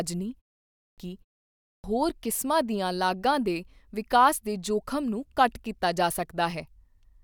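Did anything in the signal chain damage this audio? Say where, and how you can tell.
Yes. A clipped start after a pause at the playback stage: after short gaps of 0.33 and 0.36 s, the output device drops about 0.32 s of speech, at 0.66–0.98 s and at 1.52–1.84 s before "ਹੋਰ ਕਿਸਮਾਂ ਦੀਆਂ ਲਾਗਾਂ". Speech resumes abruptly without its onsets while the device wakes from idle.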